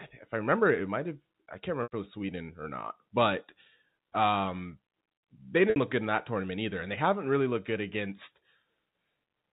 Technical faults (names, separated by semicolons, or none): packet loss with pitch repetition